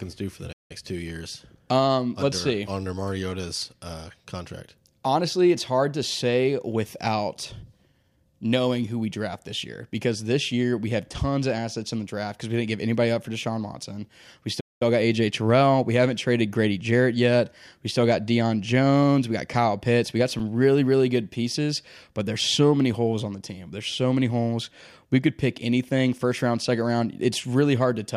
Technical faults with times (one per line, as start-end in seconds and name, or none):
0.52-0.71 playback stall
14.60-14.82 playback stall
20.39 repeated buffer